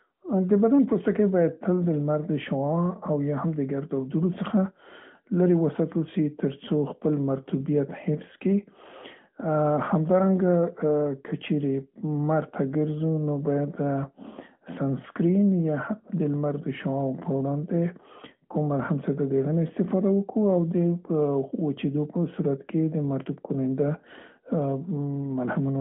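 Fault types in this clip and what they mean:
No faults found in the speech; nothing to list.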